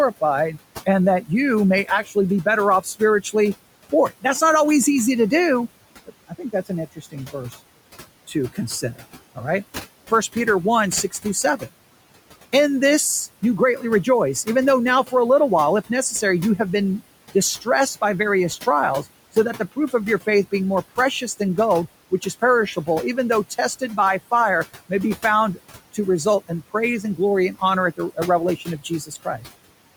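Noise suppressor artifacts run through the whole recording. The suppressor estimates the steady background frame by frame and pulls it down by about 17 dB, so the room noise, which sits about 18 dB under the speech, drops away in pauses and comes back up beneath each phrase.

Speech cut by the noise suppressor happens in five stretches. In each, the suppressor took quiet parts of the speech for noise and lowered them along with the background, so soft consonants and word tails sound swallowed. The first runs from 0.21 to 4.42 s, just before "not always easy to", with dips as deep as about 15 dB and under half a second affected in total. The second runs from 6.06 to 7.34 s, right after "always easy to do", and reaches about 17 dB over a few tenths of a second. The third (8.28 to 9.38 s, about 14 dB) and the fourth (10.33 to 11.62 s, about 12 dB) are brief. The last covers 13.42 to 29.47 s, with drops up to about 16 dB scattered across roughly a second of speech.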